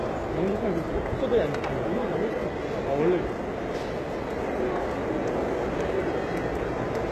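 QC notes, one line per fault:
Throughout, HE-AAC compression: plainly gritty, metallic treble that stops above 12.3 kHz, likely from low-bitrate HE-AAC rebuilding the upper bands by copying lower ones.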